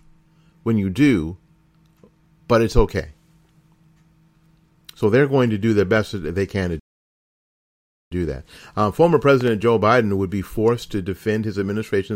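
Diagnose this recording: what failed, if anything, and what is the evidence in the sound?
The loud pop at 5.97 to 5.99 s, right after "going to do their", is a single sharp pop a few dB above the speech. A double pop follows at 9.41 to 9.50 s. The speech carries on underneath both, so this is likely a voltage spike in the analogue wiring, from static or a switch.

The playback stall from 6.79 to 8.12 s cuts the output to silence for about 1.3 s after "that they can to", and it resumes on "do that". The player was likely starved of data or its thread was blocked, so the buffer ran dry until it recovered.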